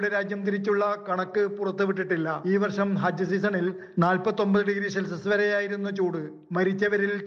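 No technical faults occur at any point in the audio, so there is nothing to describe in time order.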